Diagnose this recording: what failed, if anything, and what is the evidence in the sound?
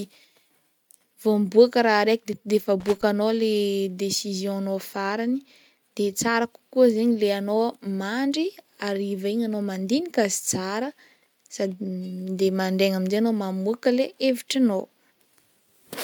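An irregular burst of crackle from 2.80 to 3.03 s: loose connector crackle in the analogue wiring, a worn contact making and breaking, chopping the signal.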